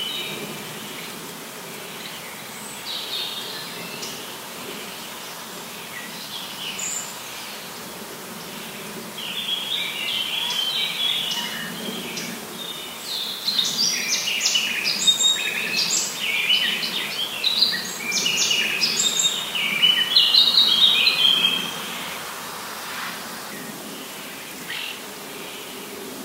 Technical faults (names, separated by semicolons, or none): low bit depth with noise shaping